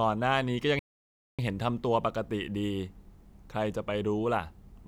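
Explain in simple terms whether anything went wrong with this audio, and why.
A playback stall cuts the speech off at 0.79 s. It goes silent for about 0.6 s, then resumes at 1.39 s. The player likely ran short of data.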